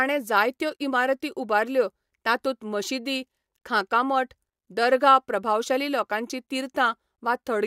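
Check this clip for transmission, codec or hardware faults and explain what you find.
No transmission, codec or hardware problems can be heard anywhere in the speech, and the signal holds steady without interruption, distortion or other audible damage.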